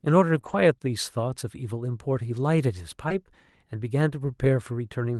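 Lost packet rebuilt from error correction, 0.37 to 0.39 s: a stretch of about 20 ms arrives only as the low-bitrate backup copy carried in the following Opus packet, so the decoder plays that coarser version instead of leaving a hole. It comes through rough and grainy rather than silent.

Short concealed packet loss, 0.41 to 0.45 s: about 20 ms never arrives in time, and the receiver bridges it by extending the preceding sound for roughly 13 ms before crossfading back to the real signal. The result is a brief smear or wobble.

Lost packet rebuilt from error correction, 0.45 to 0.55 s: another 60 ms is played from backup copies, three 20 ms packets in all. This is a longer run of coarse, noisier reconstruction. The call path itself keeps content up to about 12 kHz.

Short concealed packet loss, 3.09 to 3.12 s: roughly 20 ms goes missing again, with about 12 ms filled by extending the preceding sound. 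It gives a short smear.

Lost packet rebuilt from error correction, 3.10 to 3.12 s: the same window is partly recovered from a 20 ms backup copy. This adds some graininess.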